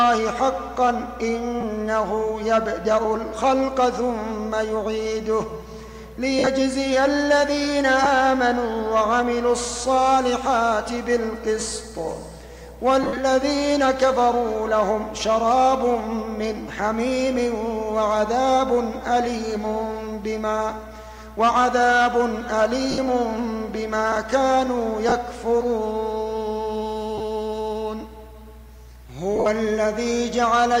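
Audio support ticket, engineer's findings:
Lost LE Audio frames at 1.61, 6.39, 8.04, 13.03, 22.91, 25.09, 27.18 and 29.36 s, 20 to 80 ms each, consistent with 10 ms LC3 frames. Decoder concealment repeats the last spectrum with random phase and fades it. Spectrogram shows smeared noise-like bands, and the waveform envelope dips.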